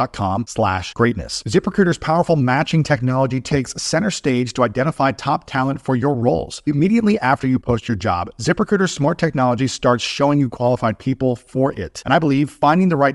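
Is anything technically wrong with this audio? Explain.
Yes. Throughout the speech, the signal has likely been through Bluetooth LC3 compression, the transform codec of LE Audio. It encodes the sound in very short blocks, and the character of the damage fits 7.5 ms frames at around 48 kbps. At that rate the encoder cannot keep every detail of the spectrum and approximates some of it. The result is plainly audible codec damage: the voice takes on a breathy, grainy edge from start to finish.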